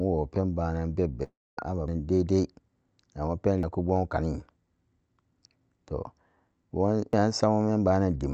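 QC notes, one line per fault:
1.23–1.59 s, long network dropout: right after "banan bebe" the sound smears into a fading buzz, then about 0.24 s of near-silence, and resumes with the lost stretch gone, likely from packets not arriving. The decaying fill and audible gap set it apart from a chunk skip.
1.88, 3.63 and 7.13 s, audio missing between chunks: each time roughly a third of a second disappears and the two sides butt together with no silence, just before "dai dai" and "kumgwam kanite", likely a recorder working in 2 s chunks dropping audio at each handover. There's no fill or fade, only an abrupt jump.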